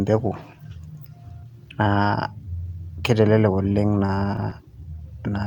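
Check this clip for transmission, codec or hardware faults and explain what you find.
One transmission fault is present. Repeated stalls (stutter), 3.63 to 4.53 s: packets arrived late, the jitter buffer kept emptying, and about ten brief gaps of up to 20 ms were filled by stretching the preceding sound. Speech drags and stutters, with nothing lost.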